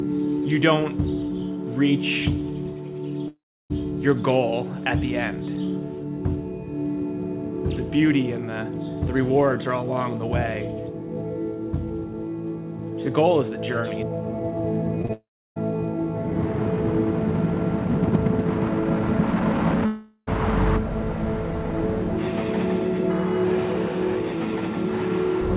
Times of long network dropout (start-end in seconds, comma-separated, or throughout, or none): 3.28-3.72, 15.13-15.58, 19.86-20.29